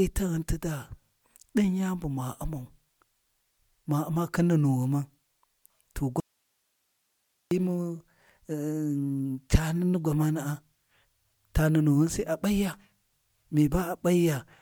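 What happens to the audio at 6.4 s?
An audio dropout to a faint residue runs from 6.20 s to 7.51 s, so 6.4 s falls inside a gap of about 1.3 s. The speech cuts out abruptly, with none of the tapering of a natural pause or fade, and only a thin hiss remains, roughly 50 dB below the normal signal level. The likely cause is a momentary loss of the wanted signal while the path after the break stayed live and passed its own noise.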